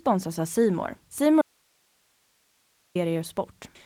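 At 1.42 s the speech cuts off abruptly, leaving only a thin hiss around 45 dB below the signal until it snaps back at 2.95 s. This audio dropout to a faint residue likely came from losing the signal feed for about 1.54 s while the downstream path stayed live.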